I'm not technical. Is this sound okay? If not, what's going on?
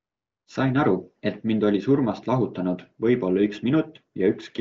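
Yes, this sound is okay; nothing is going wrong in it.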